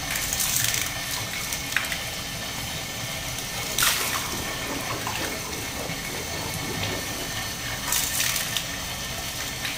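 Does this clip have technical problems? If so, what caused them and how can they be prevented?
Yes. Throughout, this is stereo read as mono. Interleaved left and right samples play as one channel, so the sound runs at half speed and an octave low. Prevent it by reading the file's channel count correctly before decoding.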